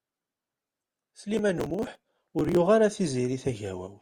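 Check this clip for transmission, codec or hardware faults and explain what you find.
There is one fault, processor overload crackle, from 1.34 to 2.57 s. The processor fell behind and missed dozens of buffer deadlines again and again, with gaps that fit buffers of around 5 ms. Each missed buffer was skipped, so the speech carries a rapid, gritty crackle of hard-edged dropouts until the load eases.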